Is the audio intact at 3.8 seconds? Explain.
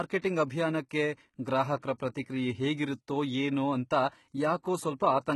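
No. At 3.8 seconds the speech carries heavy damage from what is likely HE-AAC compression, present throughout. Treble up to 20.5 kHz is rebuilt by copying lower bands upward. The s sounds turn gritty and metallic, which fits a very low bitrate near 16 kbps.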